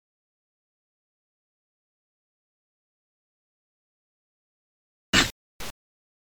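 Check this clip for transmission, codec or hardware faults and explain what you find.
No transmission, codec or hardware faults can be heard anywhere in the clip. There is nothing to report.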